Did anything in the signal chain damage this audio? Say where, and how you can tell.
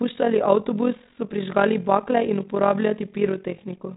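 Yes. Overlap-add ripple, introduced by frame-based call processing, runs through the whole speech clip. The level flutters by about 11 dB at roughly 40 Hz, a rough tremolo. The waveform envelope shows regular scalloping, and the spectrogram shows vertical banding once per frame. Overlapping windows that don't sum to constant gain cause it. The 3.9 kHz ceiling is simply the G.726 telephone band.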